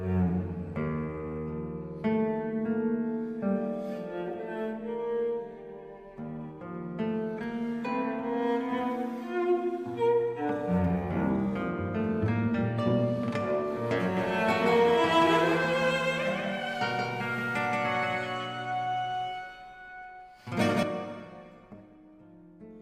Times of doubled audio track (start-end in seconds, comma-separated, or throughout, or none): 14.17-20.83